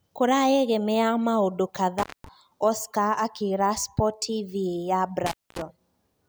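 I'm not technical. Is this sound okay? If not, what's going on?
No. Intermittent contact at 1.98 to 2.28 s and again at 5.26 to 5.62 s: a loose cable or plug briefly loses connection, so the speech drops out for about a fifth to a quarter of a second each time, with crackle as it breaks and reconnects and faint hiss in between.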